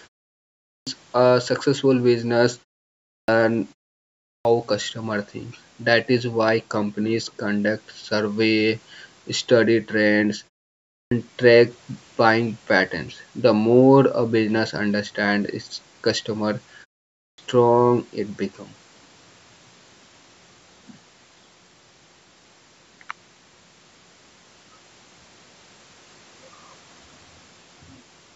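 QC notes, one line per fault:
0.54, 2.99, 4.15, 10.82 and 17.07 s: clipped start after a pause. After silences of 0.3 to 0.54 s the output device is still waking, so 0.29 to 0.33 s is swallowed and speech bursts in without its first sounds. Muted pauses, by contrast, lose no speech.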